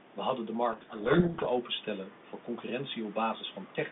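From 0.72 s to 1.47 s, between "hadden de" and "openstellen voor", the speech is buried under harsh, grinding distortion. This is a codec payload misread: the receiver takes the G.726 code words with their bits in the wrong order, so each sample's adaptive difference value is decoded wrongly and the predictor drifts into garbage. The speech comes back once both ends agree on the bit order again, with the room noise still sitting about 21 dB below it.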